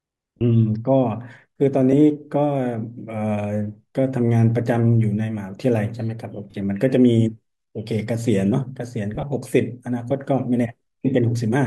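Bluetooth LE Audio frames went missing four times in this speech, and each time the LC3 decoder filled the gap by replaying the last spectrum with randomised signs. At 0.37 to 0.42 s a 40 ms gap, consistent with four 10 ms frames, becomes a brief noisy smear. Shorter smears follow at 1.92 to 1.94 s and 6.51 to 6.54 s. From 9.15 to 9.23 s, lost frames scatter over about 80 ms in runs of around 20 ms, roughening the sound, with light codec coarseness beneath.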